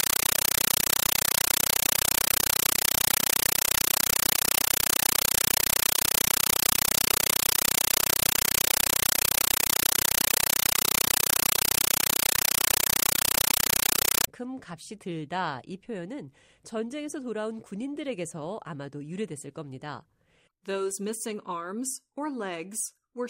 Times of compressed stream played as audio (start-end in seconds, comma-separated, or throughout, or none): 0.00-14.27